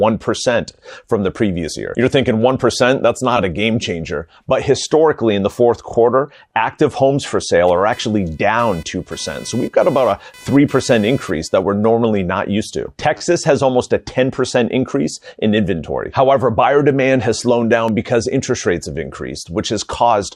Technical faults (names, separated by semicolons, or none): repeated frames; computer activity noise; block of digital silence